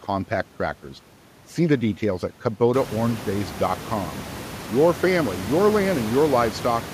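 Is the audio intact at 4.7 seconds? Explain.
Yes, the speech at 4.7 seconds is intact, with only the room's own background noise audible, sitting about 14 dB below the voice.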